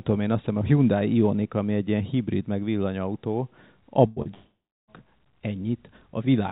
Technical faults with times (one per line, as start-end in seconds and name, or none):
4.07-4.19 burst of packet loss
4.22-4.28 short concealed packet loss
4.34-4.91 long network dropout